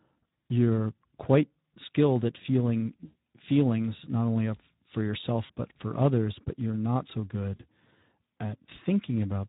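Throughout, the speech carries Speex codec damage: a hoarse, noisy texture, as if the excitation were starved of bits, with any upper band reduced to hiss-like fill. The sound fits a low setting near 11 kbps. The roughness is steady rather than warbling, unlike MP3-style swirl.

Speex packet loss concealment follows three times. At 3.05–3.16 s, about 100 ms, between "quite skilled at feeling" and "feelings not only for", the decoder stretches its last pitch and filter into a sound that fades. Shorter 40 ms versions land at 5.45–5.52 s, before "but for others but", and at 7.56–7.62 s, after "but you're not so". Each dips and stays weakened briefly afterwards, rather than cutting to silence or clicking.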